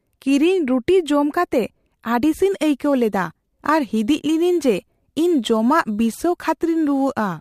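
Speech with a gritty, inharmonic fizz riding on louder and brighter sounds from 2.40 s to the end: crude rate conversion, about 30 dB down. Samples were dropped or repeated without filtering, which fits a 48 kHz to 44.1 kHz change.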